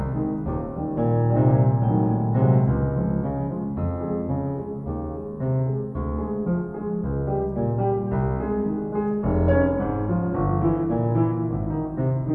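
Music running at half speed and a full octave low, sluggish and dark from start to finish: a wrong sample rate, fitting 48 kHz material played back at 24 kHz without conversion.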